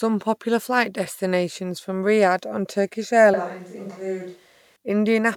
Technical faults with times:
3.34-4.76 switch to a distant microphone

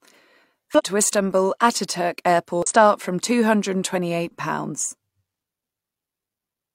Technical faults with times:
0.75-0.81 damaged data in a compressed stream
2.62-2.67 damaged data in a compressed stream

